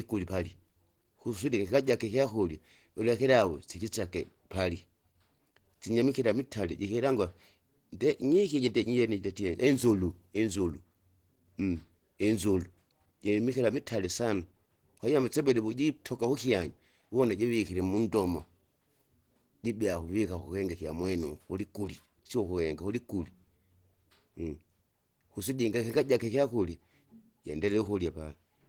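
All the way through, the speech sounds muffled and hoarse, likely Opus compression running in its hybrid speech mode at a low rate around 16 kbps.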